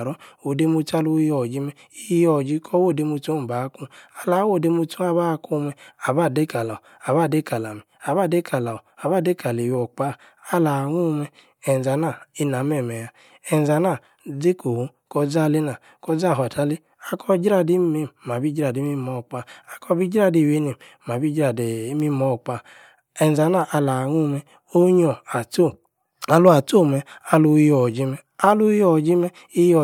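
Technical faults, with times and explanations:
Nothing technical stands out here; the speech comes through without any glitches worth flagging.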